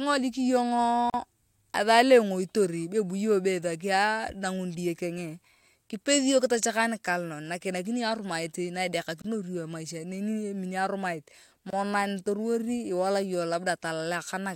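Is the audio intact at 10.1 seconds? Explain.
Yes, the audio is intact at 10.1 seconds, with no fault audible at that moment.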